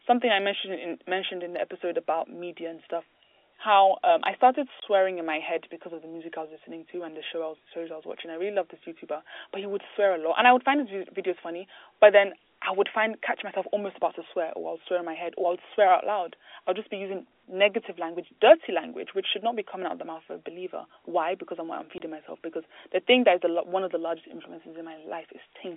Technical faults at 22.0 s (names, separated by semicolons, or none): packet loss filled with silence